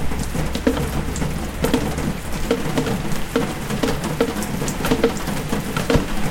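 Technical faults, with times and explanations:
1.93–1.95 s and 4.95–4.99 s, corrupt frame decoded: at each point about two compressed frames were damaged but still decoded, so misread codes and gains put energy at wrong frequencies, giving short errors peaking near -20 dBFS and -10 dBFS. The second burst also drops about 19 ms of audio.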